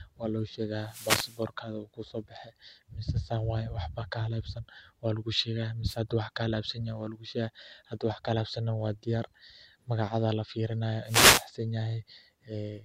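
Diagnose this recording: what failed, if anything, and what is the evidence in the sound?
Three short bursts of hiss and static break over the speech, from 0.81 to 1.47 s, from 5.86 to 5.97 s, and from 11.04 to 11.48 s, each a brief swish. These are wireless microphone noise hits in the analogue radio link ahead of the converter. Reflections arriving out of phase cancel the FM carrier, so receiver noise swells and, in the deepest fades, breaks into crackle before the signal recovers.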